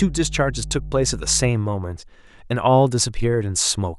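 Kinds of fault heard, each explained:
Mains hum: 0 to 1.5 s, a steady 50 Hz tone about 10 dB under the speech, power-line leakage through a ground loop or transformer.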